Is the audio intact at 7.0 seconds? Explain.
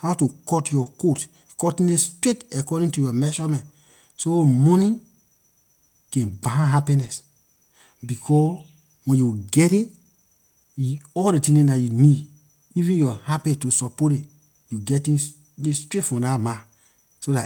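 No. From 7.02 to 7.08 s, a lost packet was rebuilt from error correction. Low-bitrate copies filled the gap, so the sound turns briefly rough and noisy.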